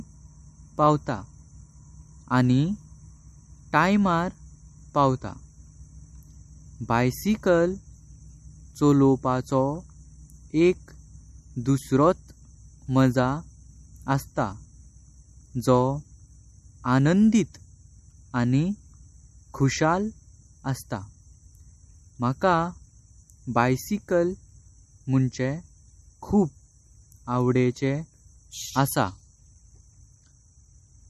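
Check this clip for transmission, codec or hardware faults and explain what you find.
There is one fault, MP3 compression, throughout. Nothing sounds above 12.6 kHz, and weak detail swirls audibly. A low bitrate, likely near 47 kbps, starved the encoder.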